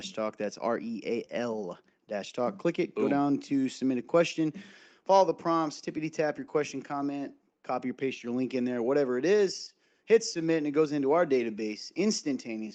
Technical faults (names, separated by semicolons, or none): clock drift between sender and receiver; repeated timing corrections